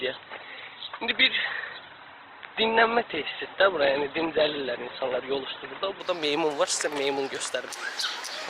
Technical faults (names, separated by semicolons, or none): adaptive stream starting at a low bitrate